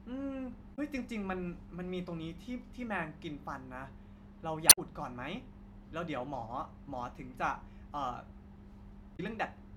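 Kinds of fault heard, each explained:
Damaged data in a compressed stream: Corrupted bytes in the encoded speech make the decoder misread frames and lose sync until it finds the next header. It sounds like a brief chirp, squawk, click or short hole, at 0.72 to 0.79 s, 4.66 to 4.78 s, and 9.13 to 9.20 s.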